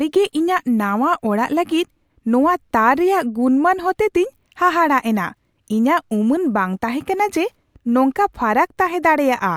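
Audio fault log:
No audible faults found.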